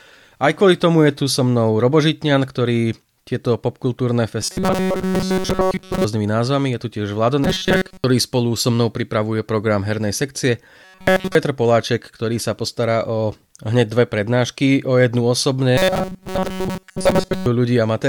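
Robotic sound from repeated short buffers appears at 4.42–6.04, 7.44–8.04, 10.84–11.35 and 15.78–17.46 s. The speech becomes a rigid metallic buzz at 188 Hz. The likely cause is a roughly 5 ms stretch being replayed while most of the real audio is skipped.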